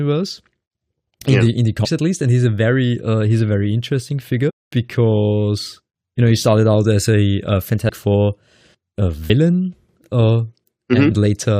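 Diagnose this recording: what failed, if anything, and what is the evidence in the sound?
Speech jumps ahead with a brief smeared blip, not a click, at 1.84 s, 4.49 to 4.51 s, 7.88 s and 9.29 s, losing roughly 200, 300, 200 and 40 ms. These are compressed frames skipped at the codec: whole 21.3 ms frames went undecoded, and overlapping neighbours blend across the gaps.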